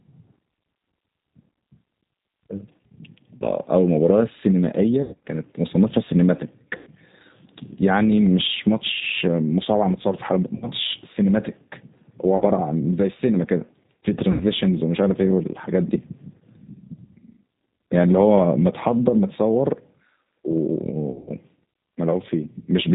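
Throughout the speech, the G.729 codec character is plainly audible. The band stops at 4 kHz, and the voice has the slightly rough, synthetic texture of a coder that rebuilds each 10 ms frame from a vocal tract filter, a pitch predictor and a few pulses. That texture fits 8 kbit/s G.729A.

Seven dropouts show VoIP packet loss concealed by the speech codec. They fall at 3.37 to 3.46 s (40 ms lost), 5.02 to 5.21 s (160 ms lost, scattered over 200 ms, longest run 100 ms), 6.77 to 6.90 s (100 ms), 10.56 to 10.68 s (60 ms), 12.37 to 12.43 s (40 ms), 14.32 to 14.45 s (80 ms) and 21.11 to 21.29 s (140 ms lost, scattered over 160 ms, longest run 80 ms). In each gap the decoder repeats its last pitch and filter at falling gain, so the sound smears into a buzzy tone or coloured noise. Because each frame builds on the one before, the voice stays weak for a short time after the packets return. The 40 ms gaps fit the loss of two 20 ms packets.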